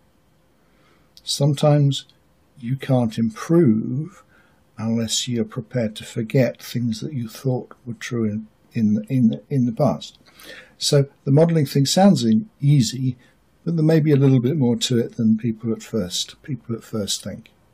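No technical faults can be heard anywhere in the recording, and the signal holds steady and continuous throughout.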